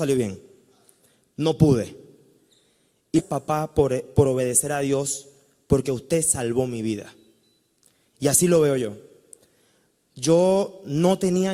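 At 3.18 to 3.21 s the sound jumps forward abruptly with a brief blip, and whatever was in progress stops and resumes somewhere later, with no continuity across the join. This is likely a stream segment skipped: one chunk of the segmented stream failed to load and playback carried on with the next. On a waveform the envelope breaks sharply at the seam; a spectrogram shows a vertical broadband click line and mismatched patterns on either side.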